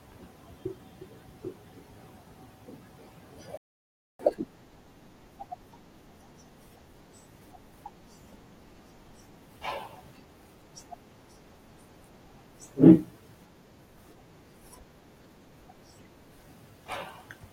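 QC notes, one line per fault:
3.57–4.19 s: rebuffering stall. The player ran dry, so the speech halts for 0.62 s of silence, then resumes exactly where it stopped, adding delay without losing anything.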